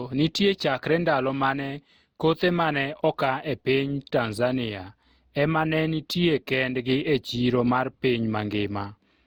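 A speech recording whose lossy encoding was likely repeated around seven times, with the sound pointing to Opus at about 64 kbit/s. This generation loss runs throughout. Each re-encode adds its own quantisation damage, so the speech sounds swirly, hollow and smeared, with blurred attacks.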